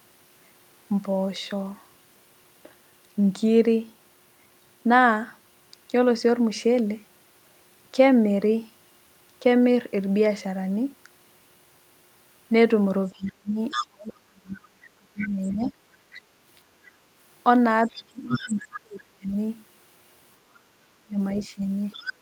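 Speech with a second, fainter voice audible underneath at 13.13–14.68, 15.21–15.51, 16.12–16.21, 17.89–18.8 and 21.4–22.13 s, roughly 10 to 25 dB down. This is other side's voice leaking through, likely loudspeaker echo the canceller missed. The main talker also dips by roughly 30 to 40 dB at 13.16–15.77, 17.89–19.36 and 20.49–21.64 s, likely speech suppressed in double talk as the canceller ducked both voices.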